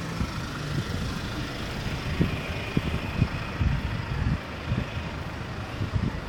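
Processor overload crackle runs from 1.59 to 2.05 s. The processor falls behind and misses dozens of tiny buffer deadlines in a row, which fits a buffer well under a millisecond. Each missed buffer is simply skipped, so hard-edged micro-gaps pile up into a gritty crackle that stops when the load eases.

Frames out of order appear from 3.25 to 3.44 s. Two neighbouring blocks, each about 93 ms and consistent with a pair of frames, are decoded in swapped order. The sound jumps ahead and then back, producing a garbled flutter while the overall length stays the same.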